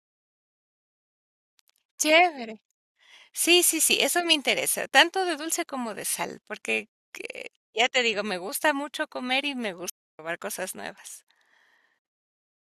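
Speech, with one playback stall from 9.90 to 10.19 s: the audio cuts to silence for about 0.29 s mid-flow, then resumes. The likely cause is the player running short of buffered data, or its output thread being briefly blocked, until it recovered.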